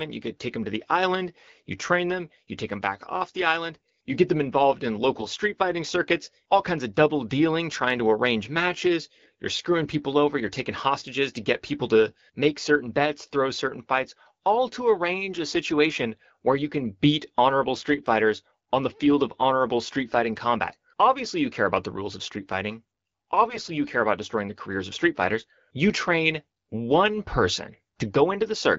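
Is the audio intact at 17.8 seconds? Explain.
No. From 17.73 to 17.88 s there are AMR bit errors: around one bit in twenty of the weakly protected bits flipped, over a stretch that fits about seven 20 ms frames. Misplaced excitation pulses and skewed gain and spectral values make the speech briefly hoarse and gargly.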